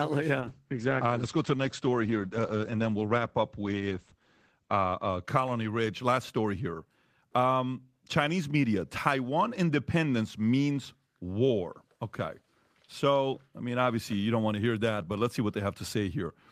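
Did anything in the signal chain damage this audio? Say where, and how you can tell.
Yes: a call bitrate drop, 0.41 to 6.25 s, at the codec/network stage. Opus fell from 32 to 11 kbps, coding coarsely and cutting highs near 8 kHz before recovering.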